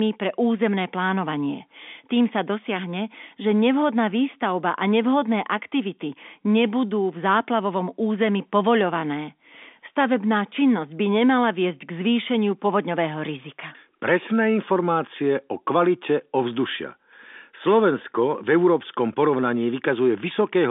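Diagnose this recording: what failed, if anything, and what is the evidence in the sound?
Nothing failed in this recording: the sound shows only the narrow band of an ordinary G.711 telephone line, with nothing above 3.7 kHz, and gives no evidence of a fault at any stage.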